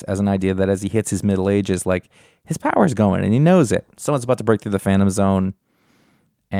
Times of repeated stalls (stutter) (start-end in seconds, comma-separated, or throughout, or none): none